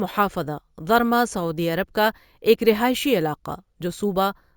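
Throughout the speech, imaging from sample-and-hold upsampling: each sample was simply repeated to raise the rate, which fits a step from 16 kHz to 48 kHz, with no smoothing filter. Mirrored speech spectrum fills 8 to 16 kHz at about 20 dB down, adding a bright metallic fizz that follows the voice.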